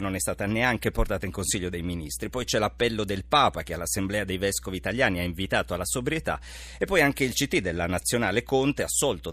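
A ground loop or a nearby transformer is coupling the 60 Hz power line into the signal path, so mains hum runs under the speech from start to finish as a steady low drone with some low harmonics, sitting only about 20 dB beneath the speech.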